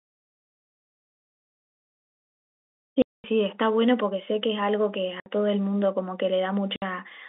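Speech heard through a narrow telephone band carries packet loss filled with silence: dead gaps at 3.02–3.24 s (220 ms), 5.20–5.26 s and 6.76–6.82 s (60 ms each). Their lengths fit 20 ms packets. Unlike concealment, nothing is smeared or repeated; the audio simply stops and restarts with hard edges.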